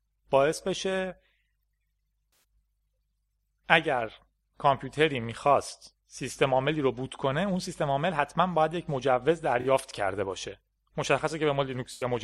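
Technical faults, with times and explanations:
2.30–2.43 s, 9.61–9.66 s and 11.93–12.05 s: AAC frame loss with concealment. For 128, 43 and 85 ms the decoder rebuilt missing frames from the last good spectrum, giving smeared, noisy patches. A spectrogram shows blurred, flattened bands, and the waveform a softened envelope.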